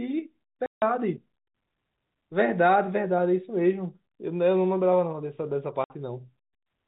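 At 0.66 s the speech drops into dead silence for 160 ms, then again at 5.84 s for 60 ms. That's packet loss filled with silence: missing packets replaced by nothing, with hard edges. Both gaps fit whole multiples of a 20 ms packet, all over the narrow G.711 telephone band.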